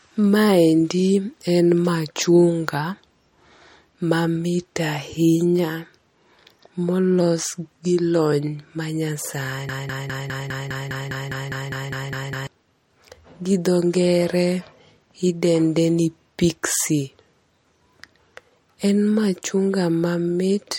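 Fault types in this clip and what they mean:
MP3 compression: Across the whole clip the speech has a plainly audible watery, swirly quality, with quieter detail flickering in and out and nothing above 17.2 kHz. That points to a low-bitrate encode around 47 kbps, likely MP3.
broken-record loop: From 9.69 to 12.47 s, a 203 ms snippet repeats exactly, back to back, 14 times, and whatever should have played there is simply gone. That's likely a player, encoder or stream stalling and resending the last bit it held.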